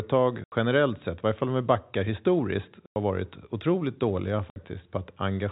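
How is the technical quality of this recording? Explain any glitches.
The speech is chopped by three short dropouts from packet loss filled with silence. The first runs from 0.44 to 0.52 s, just before "generellt sett i varje". The second runs from 2.86 to 2.96 s, between "om vi backar historiskt" and "varit otroligt dåliga". The third runs from 4.50 to 4.56 s, right after "varit otroligt dåliga". The gaps last 80, 100 and 60 ms, which fits 20 ms packets. The receiver played nothing where the packets were missing. Each hole starts and ends abruptly. The telephone band from G.711 coding can be heard throughout.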